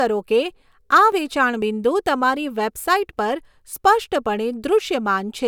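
Listening to the speech recording, nothing technical stood out.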